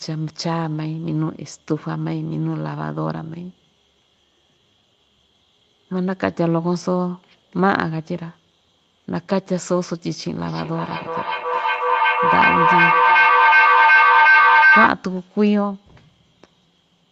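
From 10.46 s to 14.98 s the speech is overtaken by a feedback howl: a second device in the same room picks up the loudspeaker output and sends it back, and each pass round the loop comes back louder. The tone narrows to roughly 1.5 kHz, with the loop repeating about every 400 ms, and peaks about 7 dB above the speech. A spectrogram shows a bright horizontal band near 1.5 kHz, well below the call path's 8 kHz ceiling. The waveform swells into a dense, rising envelope.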